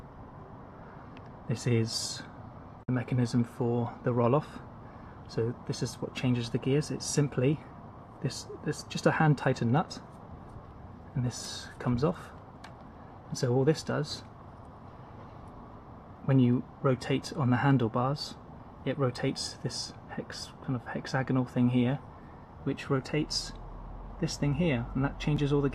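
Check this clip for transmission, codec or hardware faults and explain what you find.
Two faults stand out: a brief mute near the start and a jumbled instant right at the end.

From 2.83 to 2.89 s there is a digital broadcast dropout. The receiver stopped getting decodable data, most likely frames that failed their error check, and muted until clean frames resumed. About 48 ms of programme is simply gone, which fits two lost frames. Unlike a reordering fault, this leaves an actual hole: the sound drops to silence and picks up later, with the missing material never heard.

At 25.37 s the chunks play out of order. A piece roughly 5.33 ms long was delivered or written two chunks late, so it plays after material that should have followed it. The audio there sounds briefly scrambled. What sets it apart from the dropout is that no silence occurs and nothing is missing. The right sound is present, just in the wrong sequence.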